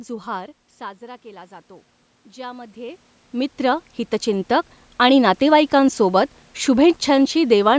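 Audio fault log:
2.23–5.47 s automatic gain rising: after the input dropped about 15 dB, the gain control gradually added about 9 dB, so the voice and room noise swell together.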